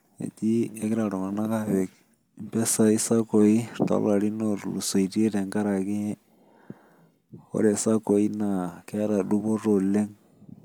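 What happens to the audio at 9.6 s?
Nothing goes wrong at 9.6 s; the speech continues cleanly through that moment with no dropout, click or other fault.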